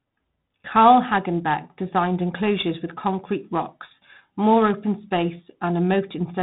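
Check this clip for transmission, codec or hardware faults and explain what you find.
There's one fault, and it runs the whole length of the speech: 4-bit ADPCM compression, and heavily damaged at that. Each sample is coded as a coarse 4-bit step from a predicted value, with the step size adapting as it goes, so the error rides along with the level. You hear a gritty hiss on every loud syllable and a roughness on sharp onsets where the step can't catch up. Nothing above 3.9 kHz, and 32 kbps points to an 8 kHz sample rate, so it's dull too.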